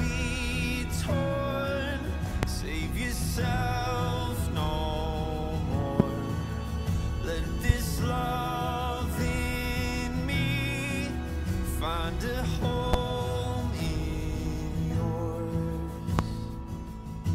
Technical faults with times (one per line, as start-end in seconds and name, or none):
2.43-2.46 loud pop
6.00-6.03 loud pop
7.69-7.72 loud pop
12.93-12.96 loud pop
16.19-16.22 loud pop